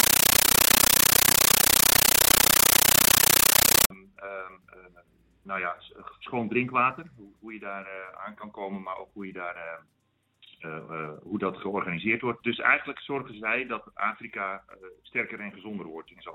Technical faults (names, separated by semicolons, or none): compressed stream played as audio